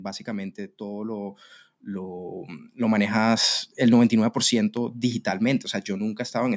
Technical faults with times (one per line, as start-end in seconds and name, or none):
0.24-3.43 automatic gain rising
4.77-5.30 CD scratch ticks